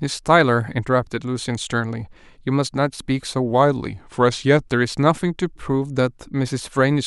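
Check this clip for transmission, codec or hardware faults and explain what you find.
One fault is present in this speech clip. A drift correction step runs from 3.5 to 4.68 s. The speech slows by 5.71% and drops 102 cents, about a semitone, then snaps back, likely from clock-matching software slowing playback in one step to refill its buffer.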